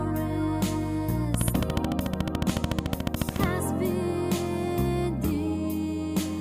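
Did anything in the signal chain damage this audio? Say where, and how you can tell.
Yes: interference from nearby equipment, or a faulty connection or power supply, likely pulsed the analogue side, giving a train of clicks, about thirty regular ticks at 13.9 per second, 1.34–3.45 s, roughly 15 dB above the sound.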